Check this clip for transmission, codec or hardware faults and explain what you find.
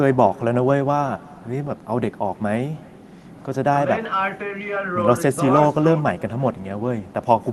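One fault runs through the whole recording: echo with no canceller. The far end's loudspeaker feeds its microphone unfiltered, so the speech returns around 300 ms later as a faint, thin copy about 26 dB down.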